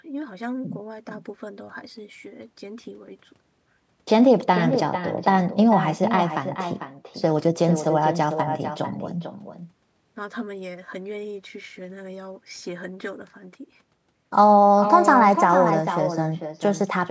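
Throughout the speech, an echo with no canceller returns each phrase around 0.4 s later, about 8 dB quieter: the far end's loudspeaker feeds its microphone unchecked. On a spectrogram, every syllable has a fainter twin trailing it, all below the 8 kHz ceiling.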